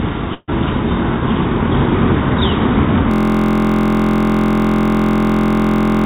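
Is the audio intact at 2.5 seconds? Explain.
Yes, the audio is intact at 2.5 seconds, with no dropout, glitch or other fault at that moment, only the narrow telephone-style band of the call path, with nothing above 4 kHz.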